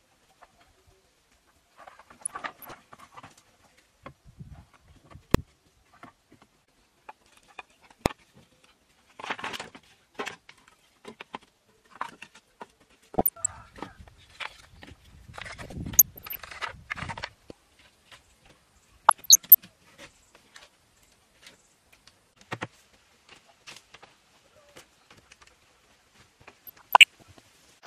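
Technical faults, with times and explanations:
2.22–2.79 s, 8.21–8.24 s, 13.15–13.47 s, 15.63–16.40 s, 19.03–19.55 s, 26.66–27.22 s: DAB burbling. A burbling of noise blips rides over the sound. Weak reception lets bit errors, on the order of half a percent, slip past error correction into the MP2 data. Corrupted samples then put short noise blips in single sub-bands, and corrupted scale factors throw sub-bands up and down in level for up to a frame.
5.35 s and 8.06 s: invalid numbers at full scale. Each is a single sharp bang. A calculation produced infinite or invalid values, which were clamped to the maximum positive or negative level. The output was pinned flat at one extreme value, far beyond the audio's peaks, for only 1.33 ms and then 0.67 ms, too short for separate start and end pops.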